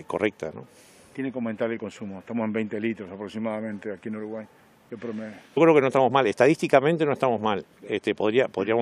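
At 5.56 s the sound suddenly jumps ahead with a small blip, as if a stretch of material just vanished. That's most likely a stream segment skipped: one chunk of the segmented stream failed to load, and the player carried straight on with the next.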